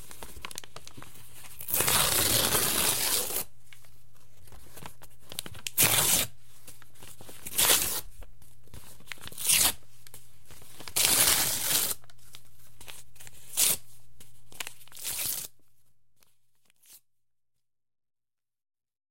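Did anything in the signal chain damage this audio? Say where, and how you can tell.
No, nothing in the chain seems to have hurt this audio; the only change in level is a gentle, deliberate-sounding fade-out over roughly the last four or five seconds, which tapers away smoothly with no click or hard edge at the end.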